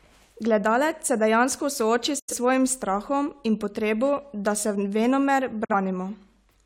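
At 2.19 s, after "se dejansko sooči", the speech fades out over about 8 ms and stays muted until 2.34 s, resuming at "svojim strahom in potrebo". This is a digital broadcast dropout: the receiver muted while frames failed. The roughly 85 ms missing fits two lost frames. A shorter hole at 5.65 to 5.75 s removes roughly 43 ms, consistent with one frame.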